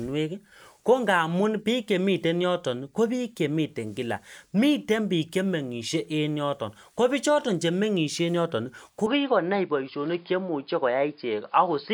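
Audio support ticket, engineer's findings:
Input switched to a poorer device, likely mid-capture, at 9.07 s, persisting to end. New path band-limited with nothing above 5 kHz, so speech turns dull and boxy. No gap at the switch, level unchanged, new noise floor roughly 45 dB below signal.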